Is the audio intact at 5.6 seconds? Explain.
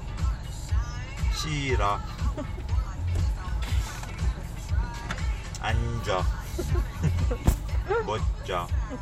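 Yes, the audio is intact at 5.6 seconds, with no fault to be heard at that moment.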